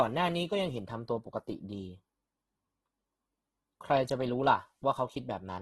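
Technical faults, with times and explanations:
Throughout, Opus compression: grainy, rough speech with nothing above 12.3 kHz; likely a low-bitrate CELT encode, around 12 kbps, folding and noise-filling starved bands.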